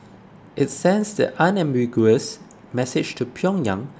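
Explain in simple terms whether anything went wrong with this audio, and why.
Nothing went wrong here: the speech comes across just as it should, with nothing cutting in, dropping out or getting in the way anywhere in the clip.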